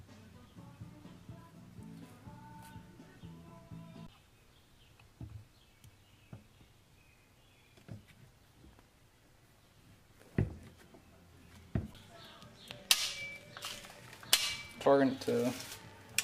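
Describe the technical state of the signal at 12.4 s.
At 12.4 s a train of clicks is running (12.25–16.20 s): about 14.5 irregular pulses per second, likely external interference, roughly fifty ticks as loud as the signal, seen as vertical spectrogram lines.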